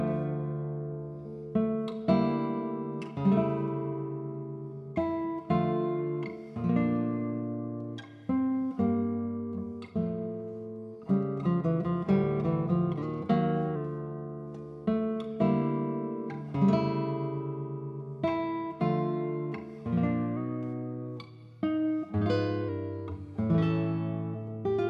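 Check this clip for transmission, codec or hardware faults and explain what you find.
Two faults of one kind. Drift correction step at 13.03–13.76 s and 20.37–22.69 s: playback speeds up 5.92%, pitch rises about a semitone, likely clock-matching software stepping rate.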